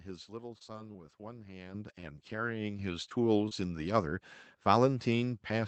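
Speech carried over a WebRTC call path, with content band-limited to about 8 kHz, as fits Opus at a low rate near 20 kbps. From 0.41 to 1.24 s, repeated packet loss gives a choppy, robotic quality. Six gaps, the longest 22 ms, lose about 60 ms of real audio, and the receiver patches each by extending the preceding sound. On a spectrogram this shows as a run of short patches where harmonics freeze into flat, overly regular horizontal lines or smeared noise, with small notches in the waveform envelope where fills fade back into real signal. At 1.74 s the microphone volume is stepped up by about 10 dB, and again at 2.79 s by about 4 dB. The call software's automatic gain raised the input device level in a single jump, so voice and background noise rise together. The waveform shows an abrupt, permanent widening of the envelope at each point, and the spectrogram brightens across all frequencies at once, noise floor included. 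Between 2.00 and 2.05 s there is a short stall from a late packet. The jitter buffer briefly ran dry, so the last sound was stretched for about 23 ms until the packet arrived, then playback resumed where it left off, with nothing lost but the timing pushed back. It is heard as a momentarily held, faintly buzzy sound, visible as a short stretch of unnaturally steady harmonics and a slight dip in the envelope. Short concealed packet loss occurs at 3.09 to 3.13 s and 3.49 to 3.53 s, each dropping about 20 ms of audio. The decoder filled these holes from the previous pitch or with shaped noise before blending back. These register as brief smears or wobbles, seen as tiny blurred patches with a small discontinuity in the waveform.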